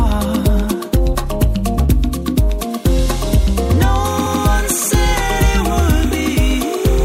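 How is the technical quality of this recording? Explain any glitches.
The recording has two clear technical faults in its second half.

From 4.05 s to the end, a steady chirping warble sits behind the sound, switching between two pitches near 1 and 2 kHz, roughly 20 dB under the main signal. This is timecode bleed: linear timecode at 30 frames per second leaking in from a neighbouring track or cable.

From 4.25 to 4.40 s, the sound stutters as a 156.7 ms stretch plays again. These are repeated frames, consistent with a run of about six compressed frames being written or sent twice. The duplicate adds 156.7 ms to the clip.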